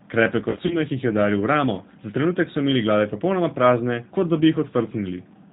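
The whole clip carries G.729 codec damage. The speech is rebuilt from a vocal tract filter and pulse excitation, which fits an 8 kbit/s codec. Nothing above 4 kHz survives. The speech sounds band-limited, slightly rough and synthetic, and that damage is plainly audible.

From 0.50 to 0.78 s there is VoIP packet loss concealed by the speech codec. About 80 ms of audio went missing, scattered over 200 ms, with gaps of up to 40 ms. The decoder stretched the last sound into a fading buzzy tone or coloured noise. The voice stays weak or distorted into "jih je udaril v".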